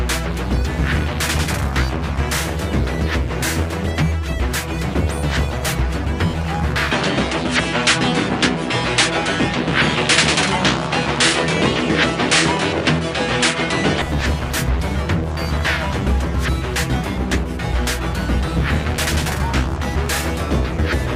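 From 6.92 to 14.02 s the sound turns duller, with nothing above 10.5 kHz. This is likely an input switched to a poorer device, which then switches back.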